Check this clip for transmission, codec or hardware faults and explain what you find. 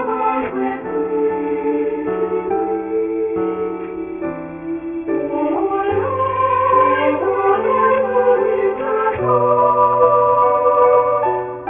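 One fault runs through the whole clip: aliasing. The audio appears to have been resampled down without an anti-alias filter, which fits a drop from 44.1 kHz to 6 kHz. Everything above the 3 kHz fold point reflects back below it as unrelated tones, roughly 20 dB under the wanted sound. The result is gritty, metallic hash with energy running right up to 3 kHz. Simple band-limiting would sound dull and clean, with no false tones.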